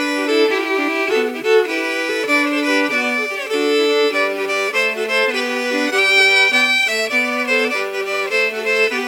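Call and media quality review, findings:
Grainy distortion tracking the sound, whole clip. Quiet passages gritty, faintest sputtering. Likely low bit depth without dither: 7-bit rounding, error around 30 dB down.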